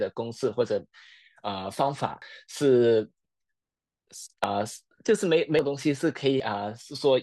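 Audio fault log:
2.22, 4.44, 5.59 and 6.4 s: dropped buffer (overrun), likely. Speech skips ahead roughly 40 ms (100 ms at 5.59 s) with a vertical spectrogram stripe and a waveform step.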